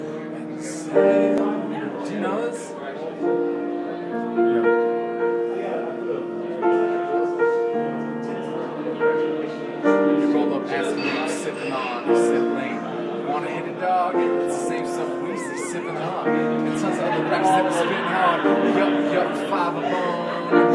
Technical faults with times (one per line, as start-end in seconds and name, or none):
none